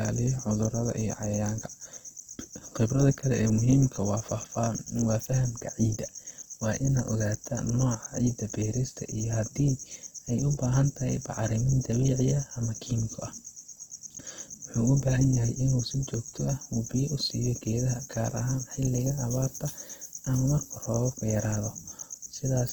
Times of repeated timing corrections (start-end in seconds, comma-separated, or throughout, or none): none